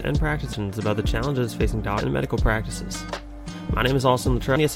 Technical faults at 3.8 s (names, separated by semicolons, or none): none